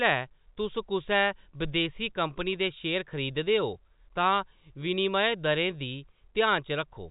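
Nothing technically wrong can be heard in this speech recording. It carries the narrow band of G.711 telephone coding, with nothing above about 3.8 kHz, and that path is working as it should.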